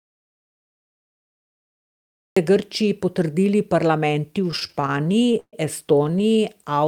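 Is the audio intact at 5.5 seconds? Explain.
No, 5.5 s falls right at the tail of a stretch of repeated stalls (stutter) running from about 4.51 to 5.55 s, just after "potrdili parlamenti v". Packets were reaching the receiver late, so its jitter buffer kept running dry, 17 times in that second, and it stretched the last sound to cover, fading it out in the longer waits, up to 132 ms. Nothing is actually lost, but about 313 ms is filler, so the speech drags and stutters.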